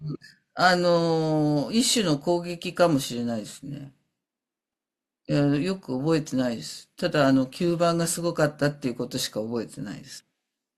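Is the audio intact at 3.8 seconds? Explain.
Yes, the audio is intact at 3.8 seconds, with no dropout, click, distortion or other fault at that moment.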